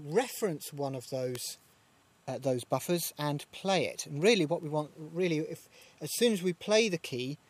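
An electrical switching spike occurs at 1.35 s: a sharp snap, peaking around -15 dBFS, that sits on top of the sound for barely a millisecond and then vanishes. It is most likely a brief arc from a nearby switch, motor or static discharge, coupled into the audio line as a sudden voltage jump. Because the disturbance is so short and steep, it registers as a hard, dry click rather than anything with pitch or duration.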